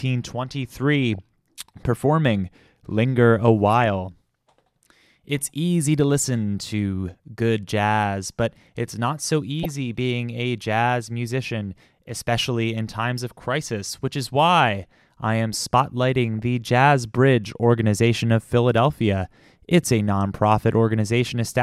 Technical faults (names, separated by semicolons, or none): DAB burbling